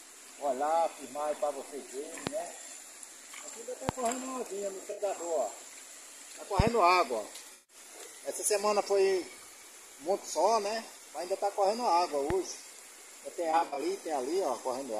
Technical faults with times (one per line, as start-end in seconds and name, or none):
2.27-2.29 loud pop
3.89-3.91 loud pop
4.91-5.01 AAC frame loss with concealment
6.60-6.70 loud pop
7.53-7.76 AAC frame loss with concealment
12.30-12.33 loud pop
13.51-13.80 AAC frame loss with concealment